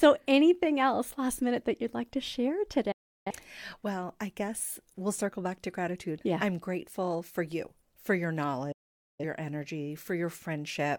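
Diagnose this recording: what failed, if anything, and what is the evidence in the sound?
Reception and decoding failed, a digital broadcast dropout: the receiver lost valid frames and muted until good ones returned. Speech fades out within 8 ms at 2.92 s after "you'd like to share", returning at 3.31 s, and at 8.72 s after "for you for your", returning at 9.24 s.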